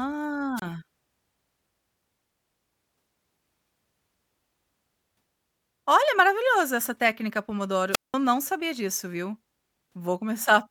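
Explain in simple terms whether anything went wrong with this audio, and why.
Twice the sound briefly hisses and cuts out, at 0.57 to 0.62 s and between "maravilhoso essa técnica pomodoro" and "não sabia disso viu" (7.91 to 8.15 s, nearly 0.2 s of silence). This is wireless microphone squelch dropout: the radio signal weakened, so the receiver muted itself.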